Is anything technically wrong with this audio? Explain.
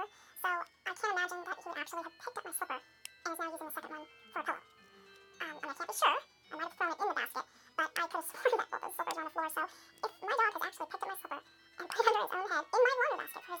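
Yes. Throughout, the audio is read two samples at a time: pairs of samples are treated as one frame, so playback runs at 2x speed and sounds an octave (12 semitones) high.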